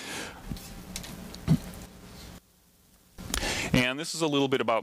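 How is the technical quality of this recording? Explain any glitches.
The recording has one glitch. From 2.38 to 3.18 s the sound drops by about 18 dB, leaving only a faint residue. This is likely one channel inverted: its polarity is reversed, so shared content cancels in the mono sum. A waveform shows an abrupt shrunken stretch; a spectrogram shows a dimmed band.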